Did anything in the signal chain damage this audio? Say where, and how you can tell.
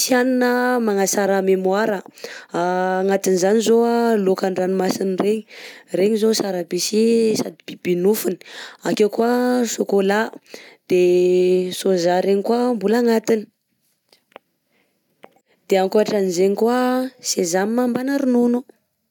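No, nothing in the signal chain damaged this audio.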